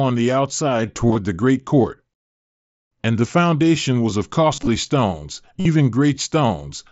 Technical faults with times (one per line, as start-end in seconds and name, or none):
1.08-1.15 concealed Bluetooth headset packet loss
4.56-4.67 concealed Bluetooth headset packet loss
5.60-5.65 concealed Bluetooth headset packet loss